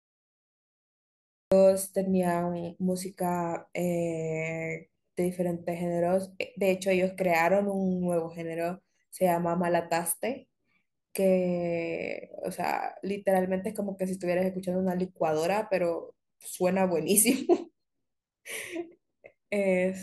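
For the first 1.52 seconds there's nothing but dead digital silence, and then the speech snaps in at 1.52 s already mid-sound. That's a classic cut-off start: whatever was capturing or streaming this got going late, so the opening of the sound was never recorded. You don't get any natural attack or fade-in; the audio just appears at full level partway through, which makes the opening feel abrupt and clipped off.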